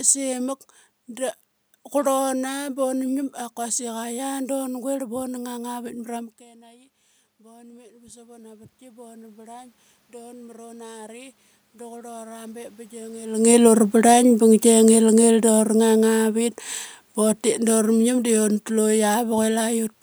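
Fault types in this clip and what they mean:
Automatic gain falling: the automatic gain control judged the input too loud or its background noise too strong and pulled its gain down gradually, by about 6 dB, between 13.94 and 16.53 s. The speech and the room noise behind it sink together over those two and a half seconds, which distinguishes it from the level shifts near 6 s and 13 s, where the talker moves relative to the microphone and the background stays put.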